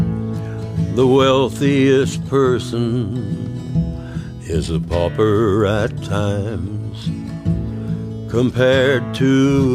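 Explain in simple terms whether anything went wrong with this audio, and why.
Nothing went wrong here: no dropouts, glitches or other faults can be heard anywhere in this recording.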